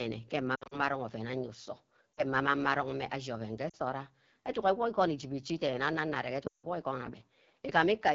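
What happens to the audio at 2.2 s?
From 2.15 to 2.23 s there are lost AMR speech frames. The gap lasts about 40 ms, which fits two 20 ms frames. The decoder hides it by reusing the last pitch and vocal tract settings at falling gain, so the sound smears and briefly fades. On the waveform the envelope shrinks. On the spectrogram the harmonics blur and dim.

The AMR wideband (HD Voice) codec at 8.85 kbit/s also makes the sound rough and raspy here, with a noise-filled band above 6.4 kHz.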